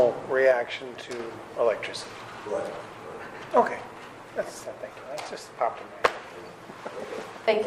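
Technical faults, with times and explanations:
0.51–1.20 s, sudden gain jump: the sound and its background noise drop together by about 4 dB at once and step back up at 1.20 s, likely from a gain setting applied without a ramp. Unlike a fade or compressor pumping, neither change has a gradual slope.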